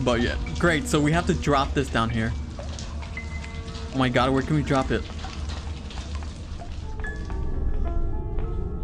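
Nothing here sounds off: the audio just runs along without a single glitch, dropout or odd artefact to point to.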